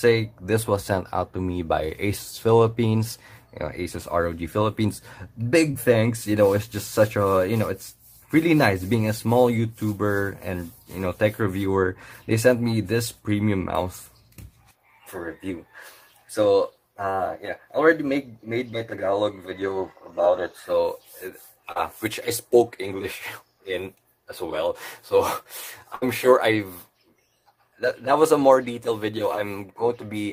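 Brief smears at 5.71 to 5.76 s and 21.72 to 21.77 s are short concealed packet loss: missing packets were patched by stretching the preceding sound. From 25.95 to 26.04 s, the sound is held and fades before resuming with 60 ms skipped, a burst of packet loss concealed by extrapolation.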